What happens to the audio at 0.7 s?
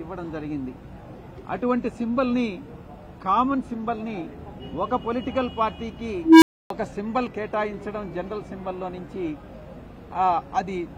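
Nothing goes wrong at 0.7 s; the audio plays through that moment intact, with no dropout, click or other fault.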